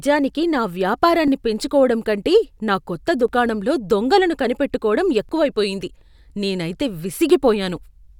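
Overlapping chunks cause short clicks or stutters at 1.28, 3.28, 5.29 and 7.30 s. Each 2.0 s chunk begins early, so about 6.5 ms of speech plays twice at every join.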